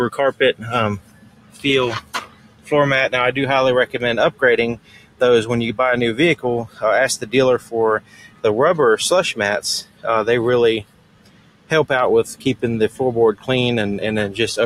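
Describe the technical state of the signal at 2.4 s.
At 2.4 s the sound is inside a stretch cut by the noise suppressor, running from 2.0 to 2.72 s. The suppressor treats this sound as noise and pulls it down by about 17 dB at the deepest point, so the level sinks and the decay ends early while sharper onsets still come through.

This sits within a broader fault present throughout: a speech-oriented noise suppressor applied to music or other sounds. It mistakes steady tones, ambience and tails for noise, making gain swing by around 20 dB, so the audio pumps and thins as sustained parts are repeatedly ducked.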